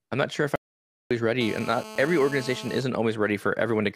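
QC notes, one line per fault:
0.56–1.11 s, audio dropout to silence: after "I'm not sure if" the signal drops to silence for 0.55 s, likely a lost input; waveform shows a dead-flat gap.
1.41–2.78 s, GSM phone buzz: a nearby phone in a call injects a steady raspy 217 Hz buzz about 14 dB below the speech, seen as evenly spaced harmonic lines.
2.78–3.91 s, GSM signalling bursts: with the caller silent, the buzz breaks into even ticks with a longer 217 Hz buzz twice a second, faint at roughly 20 dB down, appearing as intermittent vertical striped clusters.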